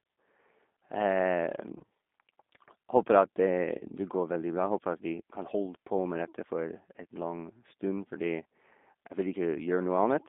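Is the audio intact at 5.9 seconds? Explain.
No, at 5.9 s you're hearing G.729 codec damage, present throughout. Speech is rebuilt from a filter and pulse model, bandlimited to about 200 Hz to 3.6 kHz, sounding clearly rough and synthetic.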